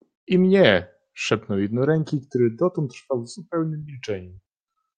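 No technical faults can be heard anywhere in the speech recording. Nothing in the audio stands out as going wrong at any point.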